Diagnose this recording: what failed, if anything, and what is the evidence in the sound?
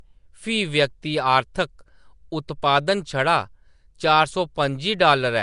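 The codec stage is at fault: the speech was likely coded with Nellymoser compression, Flash's microphone codec, at a rate consistent with about 44 kbps. Throughout, nothing remains above 10.6 kHz, and noise-filled weak bands give a plainly audible rough, hissy halo and smeared, underwater quality.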